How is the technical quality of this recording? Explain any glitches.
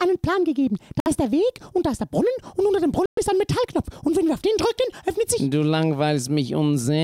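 The recording has two short dropouts, both of the kind heard as a Bluetooth stall. The first runs from 1.0 to 1.08 s, with about 60 ms of silence. The second runs from 3.06 to 3.19 s, with about 116 ms of silence. Each time the sound cuts out abruptly, then carries on. The likely cause is radio interference delaying packets, so the headphones' buffer emptied and playback paused until retransmitted data arrived.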